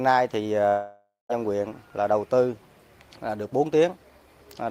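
At 0.69 s the sound suddenly smears into a buzzy, hissy continuation of itself that fades away, and that ends in about 0.16 s of near silence before the real audio snaps back at 1.31 s. The cause is likely a long network dropout: about 0.6 s of audio never reached the receiver, so it kept extending the last thing it had until that ran dry, and that stretch is simply missing when playback resumes.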